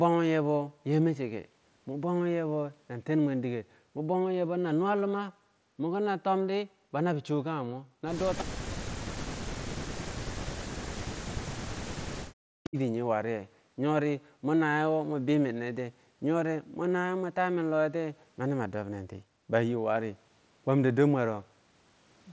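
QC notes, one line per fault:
8.38–8.44 s, echo leak: a brief, faint repeat of the speech, about 20 dB below it and trailing by 317 ms. This is likely the far end's loudspeaker output reaching its microphone and slipping past an incomplete echo canceller back into the call.
8.43–8.8, 9.03–10.28, 10.7–11.16 and 11.57–12.78 s, speech suppressed in double talk: the talker's speech repeatedly sinks or drops out in pieces, by as much as around 40 dB. This is likely an echo canceller treating overlapping talk as echo and ducking the near-end speech along with it.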